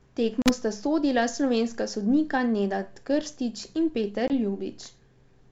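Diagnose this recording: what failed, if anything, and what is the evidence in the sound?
Two hard-edged dropouts cut the speech, one from 0.42 to 0.50 s and a shorter one from 4.28 to 4.31 s. Each is followed by brief, slight distortion as the sound resumes. This is packet loss on an ADPCM call, a network fault: about 40 ms and then 20 ms of audio went missing, a few packets each time. The gaps were filled with silence, and the G.722 decoder's adaptive predictor and step size drifted from the sender's until they resynchronised.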